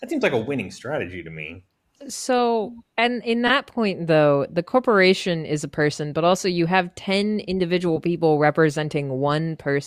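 Speech, with a corrupt frame decoded from 3.47 to 3.50 s, between "and in" and "point though the corporation". The decoder played a single damaged frame, so wrong gains or misread codes put energy at the wrong frequencies and produce a loud chirp-like burst peaking around -5 dBFS. The burst is added energy lasting about one frame.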